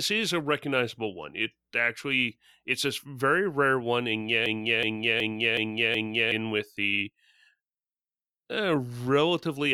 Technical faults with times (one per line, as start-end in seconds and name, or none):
4.46-6.32 system hang loop